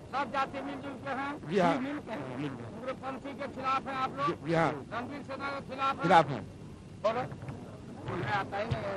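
Nothing technical jumps out here, and the audio comes across without any problems worth pointing to.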